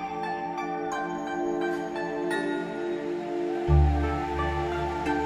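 Nothing in this one trips the ear at all, with no glitch, dropout or odd artefact turning up anywhere along the way.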